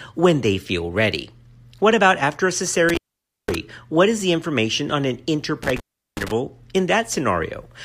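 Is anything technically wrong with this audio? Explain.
Yes. At 2.89 s, right after "about after a", and again at 5.63 s, after "the information on an", the speech drops out behind a burst of crackle, leaving faint hiss for about 0.51 s and 0.37 s respectively. This is intermittent contact: a loose plug or cable briefly breaking the signal path, so the connection scrapes open and closed.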